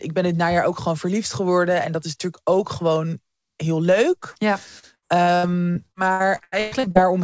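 From 4.32 to 4.38 s, just after "ook gewoon heel leuk", about 40 ms of audio arrived too late for the decoder: short concealed packet loss. The receiver bridged the hole by extending the preceding sound and then blending back, leaving a brief smear or wobble.

From 4.79 to 6.98 s, packets kept going missing, twelve gaps in all, the longest 118 ms. This is repeated packet loss (robotic sound). Each hole was patched by continuing the last sound, so about a third of the stretch is synthetic fill, giving choppy speech with fragments absent. Throughout, the call path passes nothing above 8 kHz, which fits a G.722 link.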